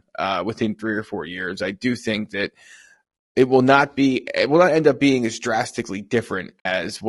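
A speech recording whose voice sounds rough and grainy from start to finish, with a hiss-like noise filling the spaces between the harmonics and a top end that feels thin and synthetic. The damage is plainly audible and is most likely the result of low-delay AAC compression, the AAC-ELD style of coding used in video calls, run at a rate that points to around 32 kbps. Its short frames cannot separate the pitch harmonics cleanly, so at that rate the coder smears noise into the spectrum and rebuilds the upper band only roughly. Near the end, from 6.60 to 6.66 s, the voice briefly dips away into a soft-edged hole of about 60 ms, fading out and back in. This is AAC frame loss with muting. A gap of that length fits about three lost frames, which the decoder replaced with silence, while the overlapping windows smoothed the edges into gentle fades.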